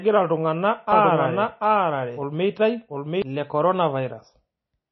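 Throughout the speech, a lossy encoder likely starved of bits, consistent with MP3 compression at around 24 kbps, has removed everything above 5.8 kHz and dropped weak frequency detail frame by frame, so the voice sounds dull, watery and swirly, with smeared consonant attacks.

From 0.92 s to 3.22 s, a second copy of the audio, likely from a duplicated path or a misaligned edit, runs about 0.7 s behind at roughly equal loudness. This doubled audio track overlaps the speech with itself, with no room tail, and cuts in and out abruptly.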